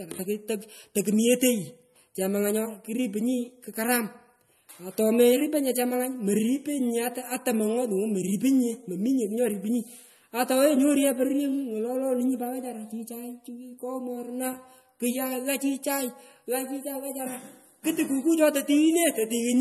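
From start to finish, the speech has nothing above 12.6 kHz, and the smeared, swirly texture of a coarse MP3 encode remains throughout. This is likely low-bitrate audio saved at a high bitrate. The damage fits an MP3 made at around 40 kbit/s and later re-encoded at 256 kbit/s, which preserved the losses without repairing them. A plain low-pass filter would leave a clean but dull sound. Here the abrupt cut-off comes with artefacts that a high-bitrate encode alone would not produce.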